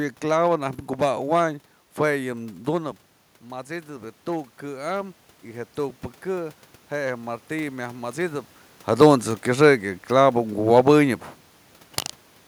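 Automatic gain rising, 2.24 to 8.56 s: input falls about 11 dB, so gain climbs about 8 dB, swelling speech and room noise together.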